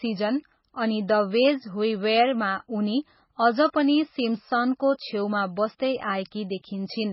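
MP3 compression runs throughout and is the likely cause of the heavy damage. The speech has nothing above 5.6 kHz, and weak frequency lines drop in and out between frames, giving a watery, swirling texture that fits a bitrate starved to around 16 kbps.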